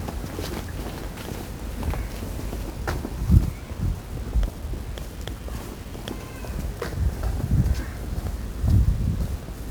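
It's a sound recording, and all the way through it carries heavy 1-bit DFPWM compression: fuzzy, crackly broadband grain with treble lost in hiss, which fits a 48 kbps one-bit stream.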